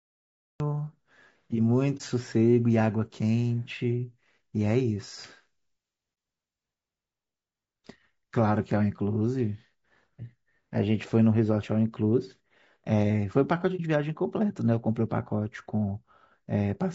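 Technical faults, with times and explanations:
Throughout, low-delay AAC compression: the speech has a rough, grainy texture, with a fizzy noise filling the gaps between the voice's harmonics and a top end that sounds thin and synthetic. This is likely the low-delay AAC used in video calls. Its short frames can't separate pitch harmonics cleanly, and they spend bits inefficiently, so the damage is plainly audible. The amount of grain fits a low rate of around 32 kbps.
0 to 0.60 s, cut-off start: the clip opens on dead digital silence, and the voice then appears at 0.60 s already mid-sound. There's no natural onset or fade-in. The recording or stream simply began late, so the first thing we hear is the middle of something being said, with an abrupt edge where the signal jumps in from zero.
1.97 to 2.01 s, 6.14 to 6.17 s and 13.76 to 13.80 s, AAC frame loss with muting: each time, the voice ducks out for about 30 ms and comes straight back. 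Each gap sounds like a single lost frame whose spectrum the decoder filled with zeros. The codec's overlapping windows taper the sound down and back up across that frame. That's why these are brief dips, not hard cuts.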